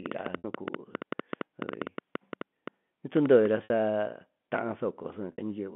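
From 0.06 to 3.47 s, a train of clicks, likely from interference or a faulty connection, injects around thirty similar pulses at an irregular seven per second, ticking well above the speech. At 0.38, 3.64 and 5.32 s, packet loss with pitch repetition drops 60 ms each time, which fits three 20 ms packets. The receiver repeats the last pitch period, so each gap becomes a brief held, buzzy sound before the speech resumes.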